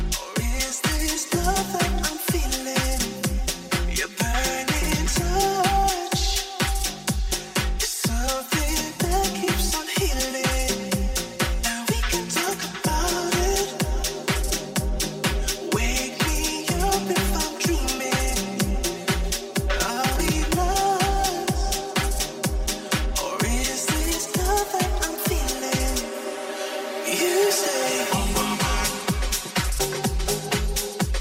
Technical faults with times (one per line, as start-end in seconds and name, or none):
0.00-31.20 channel delay (comb filtering)
24.02-25.43 drift correction step